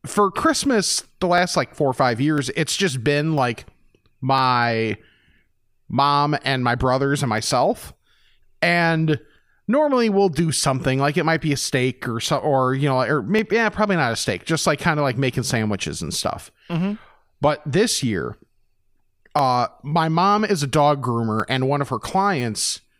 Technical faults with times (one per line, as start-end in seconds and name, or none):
0.38-22.40 clock drift buffer slips